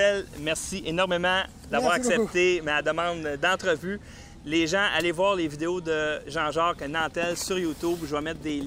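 Nothing technical stands out here; the audio holds together without a single moment that catches the ear as a fault.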